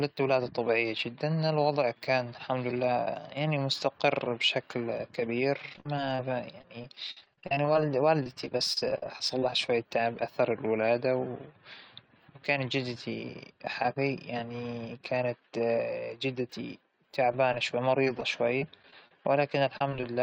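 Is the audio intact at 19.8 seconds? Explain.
No. From 19.78 to 20.03 s there is repeated packet loss, a robotic sound. Several short holes, the longest about 28 ms, are patched by repeating the preceding audio. This leaves choppy speech with pieces missing. On a spectrogram it appears as smeared, repeated frames between notches.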